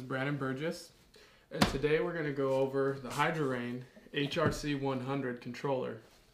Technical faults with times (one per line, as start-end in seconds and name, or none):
none